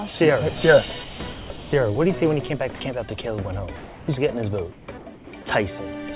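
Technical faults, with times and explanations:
1.04–1.20 s, 1.32–1.50 s and 2.76–2.80 s, sound dropped by the voice detector: real sound cuts out and steady synthetic hiss takes its place, losing about 110, 110 and 40 ms of actual audio. This is likely a voice detector misjudging quiet passages as background and halting transmission.
1.58–1.72 s, 3.76–4.08 s, 4.72–4.88 s and 5.14–5.32 s, comfort noise in place of the background: during pauses the detailed background gives way to smooth, featureless noise, likely from discontinuous transmission. It sits about 19 to 25 dB below the loud parts, and the level drops by up to about 6 dB.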